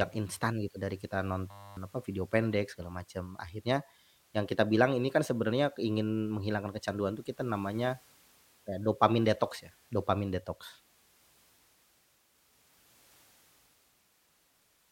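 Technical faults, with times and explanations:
1.51–1.77 s, system hang loop: the computer or its audio driver stalled just after "instan gitu dari kita", and the sound hardware kept replaying the same 10 ms stretch of its buffer rather than receiving fresh audio. That fragment repeats 26 times at 100 Hz, so the speech gives way to a steady, flat buzz at that pitch. When playback resumes at "apa video pendek segala", roughly a third of a second of speech is gone.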